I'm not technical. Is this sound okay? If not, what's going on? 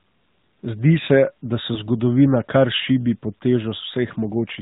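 No. The whole clip has the sound of the AMR narrowband mobile codec: everything above 4 kHz is gone, leaving a muffled, buzzy, synthetic phone-call quality rather than plain dullness. At 1.74 to 1.78 s there is a lost AMR speech frame: one 20 ms piece failed, and the decoder briefly filled in with a guess, giving a brief dip or warble instead of a clean click or gap.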